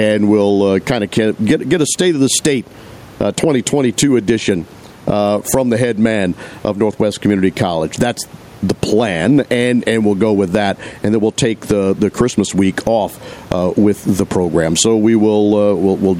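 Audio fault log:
Throughout, gain pumping: the input gain is likely set far too high for the microphone, so a fast limiter keeps clamping down on each loud syllable of the speech and releasing in the pauses. The level swings by around 10 dB, and the room noise sits about 33 dB below the speech. Loud and soft passages end up squeezed close together, giving a flattened, breathing sound.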